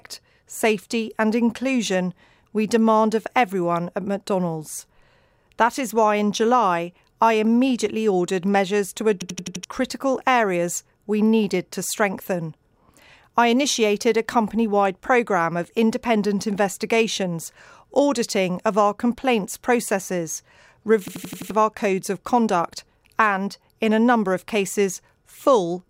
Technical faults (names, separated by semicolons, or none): system hang loop